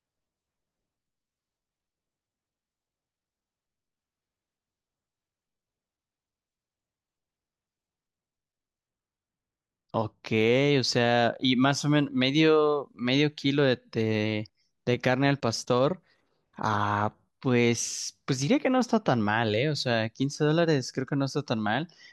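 No technical faults are audible anywhere in the speech.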